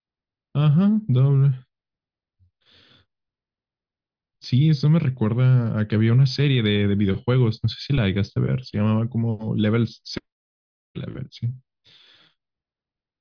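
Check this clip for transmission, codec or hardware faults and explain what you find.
Nothing in this speech recording suggests a transmission, codec or hardware fault, so there's nothing to report.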